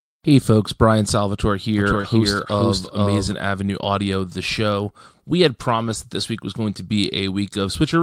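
Speech, with three separate problems. From 1.79 to 3.33 s there's a doubled audio track: a second, full-band copy of the speech sits roughly half a second behind the original and about 5 dB quieter. It has no reverb tail or room colour, and it cuts in and out abruptly at those edges. That points to the same signal being captured twice, most likely through a slower second path or a misaligned edit.

Inside that stretch, at 2.01 to 2.05 s, there's a short concealed packet loss. About 20 ms never arrived in time, so the decoder papered over it by extending the preceding sound and then crossfading back. What you hear is a brief smear or wobble rather than a gap.

The tail of that hole, 2.03 to 2.05 s, was actually recovered from error correction. The lost frame came back from the low-bitrate redundant copy carried in the next packet, so it sounds rougher and noisier for about 20 ms instead of dropping out. 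The same thing happens again at 3.83 to 3.85 s, another single 20 ms patch of grainier audio. Between 5.75 and 5.93 s it recurs several times: about 100 ms in total is rebuilt from those redundant copies, which fits roughly five separate lost packets. That stretch has a coarser, noisier texture.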